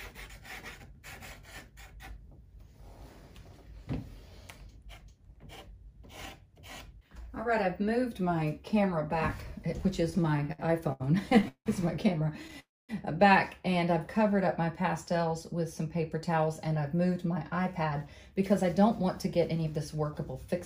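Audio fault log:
10.03–11.68 s, repeated stalls (stutter): The sound halts and restarts 14 times in about 1.6 s. Each halt is bridged by a continuation of the preceding sound, fading in the longest one of 174 ms. About 423 ms is filled in, roughly a quarter of the span, and nothing is lost. Packets kept arriving late and the jitter buffer kept running dry. Unlike a single freeze, the stalls are many and short, giving a halting, dragging rhythm.
12.59–12.91 s, call audio freeze: A single stop of about 0.3 s. The last sound carries on briefly as a fading buzz or hiss, then drops to silence for about 230 ms before the audio resumes exactly where it broke off. Nothing is skipped, but 292 ms of delay has been inserted. The likely cause is a batch of packets held up in transit, emptying the jitter buffer. Unlike the stutter before it, this is one continuous gap with a silent tail, not a chain of brief hiccups.
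14.19–15.18 s, jitter buffer slow-down: Over about a second the audio plays at 96% speed, with pitch unchanged. About 48 ms is added by repeating single pitch periods and bits of pauses over and over, so sounds are slightly drawn out. The receiver was rebuilding its buffer reserve. Unlike a stall, the sound never stops or fades. It just drags evenly, and no gap or filled-in tail can be heard.
16.93–20.55 s, jitter buffer speed-up: For about 3.6 s the audio runs at 105% speed at its normal pitch, sounding slightly hurried. Short stretches of one or a few pitch periods are cut out again and again, removing about a fifth of a second in total. The buffer had accumulated more audio than its target, so the receiver was trimming the delay. Unlike a tape or resampling speed-up, the pitch does not rise. Only the timing tightens.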